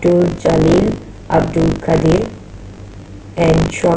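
From start to end, the speech carries buffer tearing: a robotic rattle at 50 Hz, which points to a 20 ms buffer period. Writer and reader have drifted so they cross within each period, and a small slice, around a sixth of every buffer, replays audio from roughly 40 ms earlier, with hard joins on both sides. Unlike mains hum at the same rate, the buzz vanishes in pauses because it only rides on signal.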